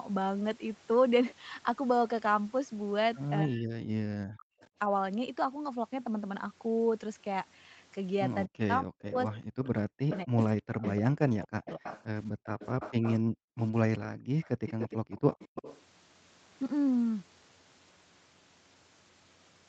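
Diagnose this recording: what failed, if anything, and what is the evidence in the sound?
Speech suppressed in double talk, at the call-processing stage: the voice sinks by up to roughly 40 dB in pieces between 3.43 and 4.48 s, and again across 8.46 to 11.85 s, about a second and two seconds of dips in all. The likely cause is the echo canceller clamping both talkers while the far side speaks.

Echo leak, also in call processing: a delayed copy of the voice returns about 240 ms late. At 4.6 to 4.68 s it is a faint scrap, about 35 dB down. From 9.64 to 15.82 s it is a sustained trail only about 10 dB under the speech. The likely cause is the loudspeaker end's canceller leaving residual pickup in its outgoing signal.

Background gated by the echo canceller: between 12.32 and 15.1 s the room sound is pushed down by about 40 dB in bursts totalling around a second, then returns. This happens while the loudspeaker plays, as the canceller attenuates the microphone path and then releases it.

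Lost packet rebuilt from error correction, at the network stage: ten 20 ms frames between 12.83 and 14.11 s, bunched around 13.2 to 13.3 s and 13.7 to 13.8 s, sound briefly rougher and noisier with no gaps. The decoder filled each lost packet with the low-bitrate in-band FEC copy carried in the following Opus packet.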